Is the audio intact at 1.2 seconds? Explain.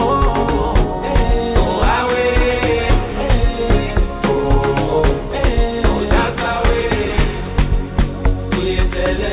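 Yes, the audio at 1.2 seconds is intact, with no dropout, glitch or other fault at that moment.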